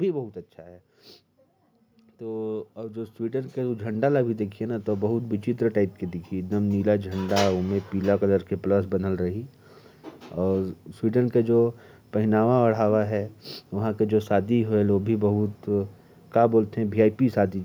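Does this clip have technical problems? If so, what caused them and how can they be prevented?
Yes. From 2.2 s to 7.26 s the level climbs by about 14 dB in a slow, steady ramp, with the speech and the background noise swelling together. This is automatic gain rising: the AGC judged the input too quiet and raised its gain gradually over several seconds. To prevent it, set a fixed input gain at a proper level and disable automatic gain control on the recording path.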